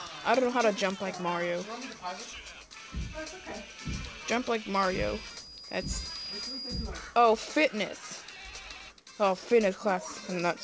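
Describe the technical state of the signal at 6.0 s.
A feedback whistle runs from 4.71 to 6.94 s, likely from a speaker-to-microphone loop at the edge of feedback, holding a thin 4.9 kHz tone well below the sound.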